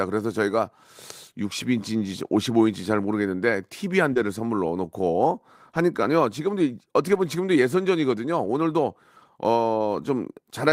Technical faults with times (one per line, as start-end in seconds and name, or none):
2.25-2.31 lost packet rebuilt from error correction
4.13-4.17 short concealed packet loss
4.15 lost packet rebuilt from error correction
5.23 lost packet rebuilt from error correction
7.09-7.23 lost packet rebuilt from error correction